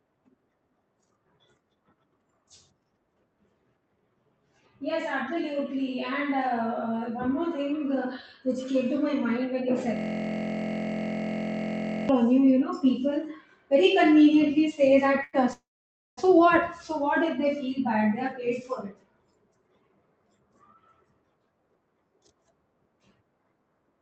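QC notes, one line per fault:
9.97–12.09 s, system hang loop: a single 23.22 ms slice of audio repeats exactly, 92 times, producing a steady buzz at 43.1 Hz instead of speech. This fits a 1024-sample ring buffer cycling while the driver or host was frozen.
15.23–15.35 s, short stall from a late packet: the sound is held for 97 ms, with a slight buzz or dip, before speech resumes from the same point. The jitter buffer ran dry waiting for a late packet, so nothing is lost but delay grows by 97 ms.
15.53–16.19 s, call audio freeze: the last sound continues as a fading tone, then goes silent for about 550 ms. Speech resumes where it stopped, adding a 642 ms gap with nothing missing. The likely cause is packets held up in transit, emptying the jitter buffer.
18.81–19.97 s, jitter buffer speed-up: speech runs at 113% speed at unchanged pitch and sounds hurried. Roughly 150 ms of excess buffered audio is trimmed in many small pitch-period cuts to bring delay back down.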